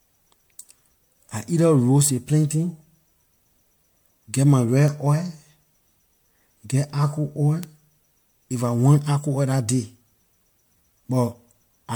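Repeated lossy coding has most likely worn down this speech recording: it sounds as though it was decoded and re-encoded as MP3 about four times, at a quality that fits 96 kbit/s. Each pass quantises the signal again on a shifted frame grid, so the errors stack rather than cancel. The result is generation loss heard across the whole clip: a swirly, hollow, smeared texture with softened consonant attacks, and nothing above 19.9 kHz. Separately, a single flipped bit in one sample produces a bit error spike at 7.63 s, just after "argo oil". The sample's value jumps by a power of two and immediately returns, so it is heard as one sharp, broadband tick that has no relation to the surrounding sound.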